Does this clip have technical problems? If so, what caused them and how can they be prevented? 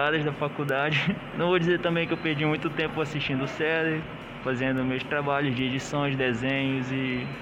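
Yes. Four bit error spikes occur, at 0.69 s (peaking about -15 dBFS), 3.12 s (about -33 dBFS), 4.78 s (about -27 dBFS) and 5.59 s (about -33 dBFS, two samples long). Each is a single isolated tick, broadband and unrelated to the surrounding audio, where one or two sample values jumped by a power of two after a bit flipped in memory or on a digital link. Prevention: use error-checked transport and storage (CRC or ECC) and repair damaged links or cabling.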